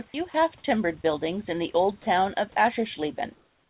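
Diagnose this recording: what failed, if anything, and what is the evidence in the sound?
Sound dropped by the voice detector, at 0.08–0.14 s, 0.30–0.34 s, 1.02–1.04 s and 2.02–2.06 s. This is a call-processing fault. In each gap the speech briefly gives way to a flat, steady hiss and then resumes. The gaps last 20 to 60 ms. The likely cause is the sender's voice activity detector judging quiet stretches of speech to be background and halting transmission, so the receiver filled each gap with synthetic comfort noise.

Onset clipped by the voice detector, at 0.62–0.64 s. This also happens in call processing. The speech re-enters abruptly, missing its soft start, and about 20 ms of the beginning is replaced by steady noise. The likely cause is that the detector reacted late when speech resumed. The opening was never sent, and comfort noise stood in for it until transmission restarted.

Comfort noise in place of the background, from 3.34 s to the end. 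After the last speech, the room's real background, which sits about 38 dB below the speech, is swapped for a smooth, featureless noise about 1 dB quieter that lacks the original's detail. The likely cause is discontinuous transmission: the sender stops sending during the pause and the receiver synthesises noise roughly matching the background. Across the whole clip, the band-limited narrowband call sound has nothing above 4 kHz.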